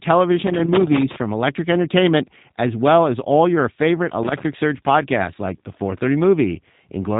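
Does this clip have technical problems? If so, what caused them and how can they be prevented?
Yes. G.729 codec damage runs throughout this speech. Rebuilding each frame from a few pulses sounds rough and synthetic, and nothing above 3.8 kHz passes, which fits 8 kbit/s. Use a wideband codec such as Opus or G.722 instead.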